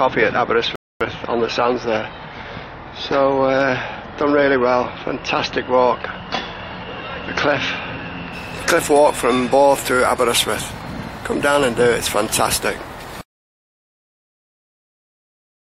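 At 0.76 s the audio halts in a rebuffering stall: playback drains its downloaded buffer and waits for more data, leaving a gap of silence until 1.01 s. When the sound returns, it picks up exactly where it broke off, so nothing is skipped, but about 251 ms of dead time is inserted into the timeline.

From 13.21 s the sound cuts out completely in an audio dropout to silence that runs to the end of the clip. The gap is silent, with no room tone or background noise underneath, which points to the input signal being lost while recording or encoding continued to write empty samples. A disconnected device or a dropped link is the likely cause. Whatever occurred during those final 2.4 seconds is not recoverable.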